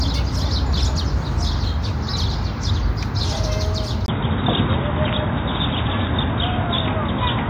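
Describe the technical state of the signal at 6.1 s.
At 6.1 s the signal sits inside a stretch running from 4.06 s to the end that sounds like the input switched to a poorer device, likely a change to another microphone or a headset's call profile. Nothing is left above 3.8 kHz, so the sound is dull and boxy, and a new noise floor about 45 dB below the signal appears while the level stays much the same. A 20 ms gap at the switch and that changed background distinguish it from a plain filter or codec bandwidth drop.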